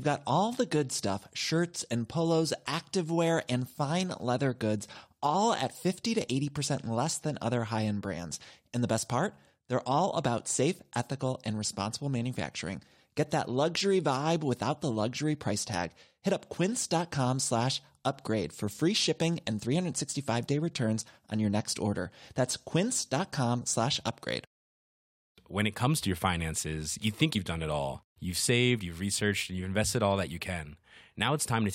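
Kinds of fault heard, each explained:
Compressed frames skipped: At 27.34 s the speech jumps forward. About 20 ms of audio is never heard. Whole frames of the coded stream were lost or rejected by the decoder, so playback resumes further on.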